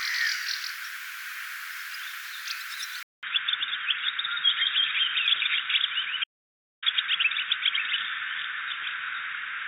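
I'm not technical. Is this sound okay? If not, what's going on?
No. From 3.03 s the sound turns dull and muffled, after a brief silence of about 0.2 s, with nothing above 3.8 kHz, a faint new background noise, and the same overall loudness. This is likely an input switched to a poorer device, such as another microphone or a headset.

From 6.24 s to 6.82 s the sound stops completely for a little over half a second, with no background at all, then returns. This audio dropout to silence is likely a brief loss of the input, so whatever happened in that gap is gone.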